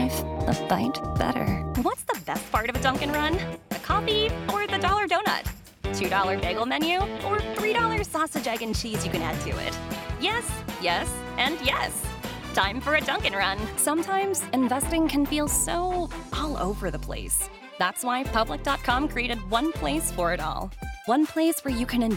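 Nothing stood out as a technical fault on listening to this audio.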